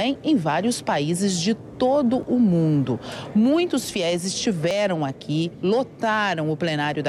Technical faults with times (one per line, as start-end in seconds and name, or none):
2.23 audio missing between chunks
4.71 audio missing between chunks